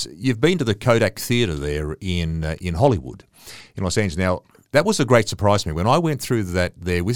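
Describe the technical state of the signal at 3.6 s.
At 3.6 s the speech sits inside a Bluetooth SBC bit pool drop running from 2.82 to 4.39 s, between "there in uh in" and "that was a great". The encoder has cut its bit budget, so the upper sub-bands are starved and the rest are coarsely quantised: treble dulls while a gritty noise rises, consistent with a fall from a bit pool near 28 to about 13. Unlike a dropout, the sound never stops, and unlike a clean low-pass it carries grit.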